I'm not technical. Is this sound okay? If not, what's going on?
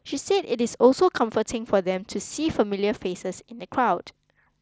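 Yes, this speech recording is technically sound, with nothing wrong in it beyond the mild limits of the Bluetooth headset link it travelled over, which caps how bright and detailed the sound can be.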